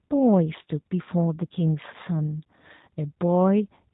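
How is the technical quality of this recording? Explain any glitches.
The quality is compromised from start to finish by low-bitrate voice coding. G.729 codec damage runs the whole clip, consistent with an 8 kbit/s G.729 codec. The speech is rebuilt from a filter model and sparse pulses with nothing above 4 kHz, so it sounds muffled, a bit rough and synthetic.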